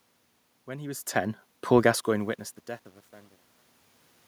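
From about 1.71 s, just after "he was ten", the fade-out starts to sound grainy, and from around 2.31 s to the end at 4.28 s the quiet tail turns gritty. This is truncation distortion on a fade: the fade stage kept too few bits, which fits roughly a 10-bit path, and added no dither, so as the level sinks the waveform collapses into a handful of coarse square steps.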